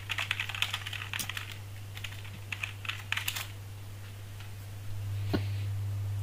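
Three short chirping bursts of misplaced noise cut across the sound: a fairly loud one from 1.19 to 1.26 s, a much fainter one from 2.31 to 2.37 s, and another loud one from 5.30 to 5.39 s. Each is a corrupt frame decoded: flipped bits in the compressed stream gave the decoder wrong gains or codes, so it put energy at the wrong frequencies. The 60 to 100 ms length of each burst points to a few consecutive damaged frames.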